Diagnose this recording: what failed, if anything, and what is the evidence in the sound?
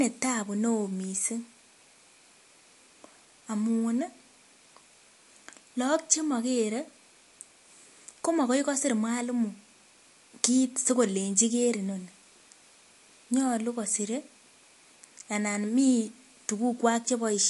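The failure is at the codec stage, and the likely cause is MP3 compression at a low bitrate. Across the whole speech recording nothing is present above 11.3 kHz, a hard treble ceiling of the kind an encoder imposes when bits run short. The damage is plainly audible: weak spectral detail drops in and out between frames, giving a watery, swirling texture and metallic chirps on s sounds. That fits a bitrate somewhere near 49 kbps.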